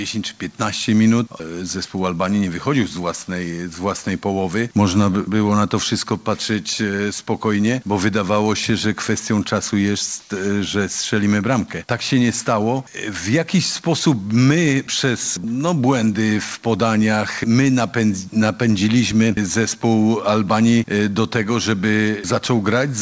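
From 10.2 to 10.3 s, the background is replaced by steady, featureless comfort noise, about 2 dB quieter. Discontinuous transmission during a pause is the likely cause.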